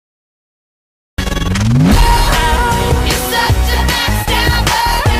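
The audio opens with digital silence until 1.18 s, then enters abruptly mid-sound with no natural attack or fade-in. This is a cut-off start: capture or streaming began late, so the beginning of the sound was lost and playback picks up partway through it.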